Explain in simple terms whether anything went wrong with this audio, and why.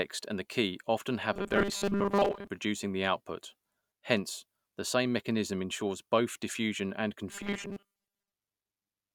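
Twice the speech turns into a stiff, metallic buzz: from 1.33 to 2.47 s, after "and the key often", and from 7.31 to 8.32 s, after "ensures both diffusion and". This is robotic sound from repeated short buffers, likely caused by audio arriving too slowly, so the software loops a 5 ms scrap in place of most of the real sound, imposing a fixed 200 Hz buzz.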